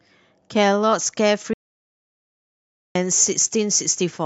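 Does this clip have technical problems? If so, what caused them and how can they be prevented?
Yes. From 0.83 s to the end, the speech has pre-emphasis left on. The treble was lifted along an FM-style 50 µs curve and the matching de-emphasis was never applied, so 10 kHz sits about 10 dB higher relative to 1 kHz than it should. The result is thin, bright and sibilant, with consonant edges pushed forward. To prevent this, apply the matching de-emphasis wherever the boosted signal is decoded, and confirm the time constant matches on both ends.

Between 1.54 s and 2.95 s there is an audio dropout to silence. The sound cuts off mid-flow and is replaced by about 1.42 s of silence with no room tone at all, and then the speech resumes abruptly. The likely cause is a loss of the input signal, such as a disconnected device, a failed link or an accidental mute, while the recorder kept writing silence. 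To prevent this, secure cables and wireless links, monitor input levels during recording, and set up alerts for sustained digital silence.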